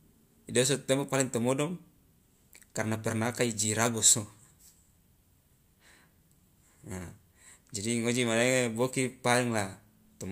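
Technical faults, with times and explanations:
No technical faults heard.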